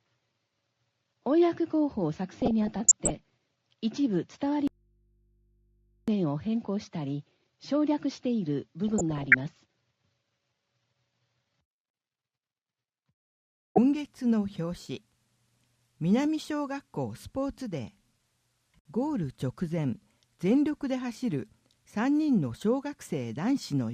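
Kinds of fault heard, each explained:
DAB burbling: Twice the sound breaks into burbling blips of noise, from 2.36 to 3.10 s and again from 8.88 to 9.47 s. This points to weak digital radio reception, where bit errors at well under one percent slipped past error correction into the MP2 stream and corrupted sample values across many consecutive frames.
Audio dropout to a faint residue: From 4.68 to 6.08 s the sound cuts off abruptly for 1.40 s and comes back just as suddenly, with no fade at either edge. The gap is not silent. It holds a low mains hum about 40 dB below the normal level. The likely cause is that the wanted signal was lost upstream while the following chain stayed live, leaving only hum picked up on the now-open input.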